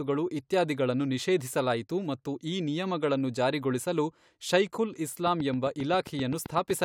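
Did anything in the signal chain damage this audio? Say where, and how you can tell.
Yes: a train of clicks at 5.27–6.84 s, after "ಈ ನಿಯಮಗಳನ್ನು ಜಾರಿಗೊಳಿಸಲು ಶೈಖುಲ್". Regular pulses at 7.7 per second, peaking about 5 dB above the speech, are likely interference in the analogue wiring.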